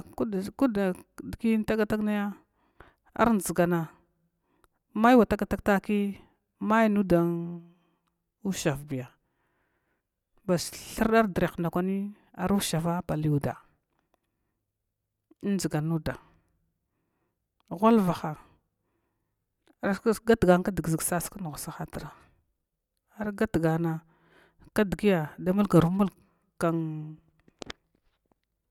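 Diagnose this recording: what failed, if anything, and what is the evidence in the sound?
No failure is audible anywhere in this recording.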